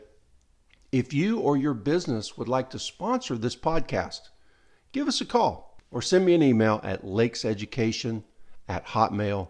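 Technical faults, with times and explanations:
Nothing technical stands out here; the speech comes across without any fault worth flagging.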